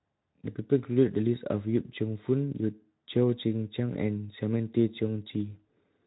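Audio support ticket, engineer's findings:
Engineer's findings: no fault found in this speech clip; the Speex path at 15 kbps is working as expected.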